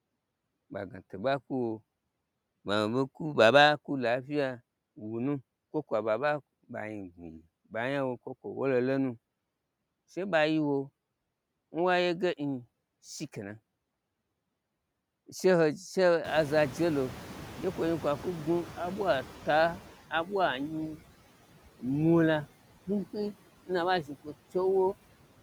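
Noise suppressor artifacts run throughout: the suppressor pulls steady noise down by about 18 dB frame by frame, leaving a residue that sinks between words and swells beneath them.

Noise suppressor catching up from 16.24 to 19.91 s: when the room noise jumps by about 22 dB around 16 s, the noise estimate lags, so reduction starts at only about 10 dB and tightens over 3.67 s.

Speech cut by the noise suppressor from 24.04 to 24.33 s, right after "na aɓa": the suppressor mistakes part of the speech for noise, dipping it by up to about 12 dB for around a tenth of a second, so it sounds swallowed.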